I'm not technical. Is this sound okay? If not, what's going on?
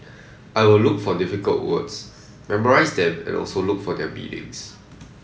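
No. From 0.41 to 0.54 s a very faint delayed copy of the speech follows about a quarter second behind. That is an echo leak, likely from a speakerphone whose echo canceller missed some sound. Unlike room reverberation, it's a separate late repeat, not a smooth tail.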